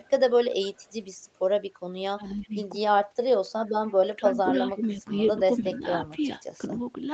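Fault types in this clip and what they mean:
Echo leak: A delayed copy of the sound comes back about 286 ms late, likely because a loudspeaker on the far end let some of its output slip past the echo canceller. It shows briefly at 0.04–0.1 s and 0.75–0.92 s at about 35–40 dB below the main signal, then more strongly at 3.87–4.76 s, about 20 dB down. On a spectrogram it appears as faint, shifted duplicates of the main harmonic bands.
Speech suppressed in double talk: The level dips by as much as about 15 dB in pieces, likely because the echo canceller turned down both its own talker and the loudspeaker echo while both sides were active. This happens within 2.19–2.54 s, about a third of a second in total, and again across 4.06–6.81 s, about a second in total. The waveform envelope visibly sags in those spans. On the spectrogram the energy fades.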